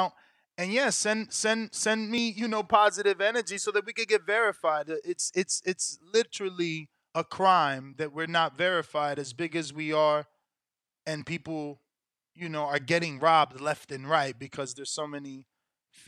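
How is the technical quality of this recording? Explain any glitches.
The recording has one glitch, a brief skip in the speech at 2.18 s, between "send send send" and "you know positive energy". About a twentieth of a second of sound drops out, and the two sides butt straight together with no gap, so the phrase jumps forward abruptly. This is audio missing between chunks: the recorder likely works in blocks of around 5 s and lost a short slice while closing one block and starting the next.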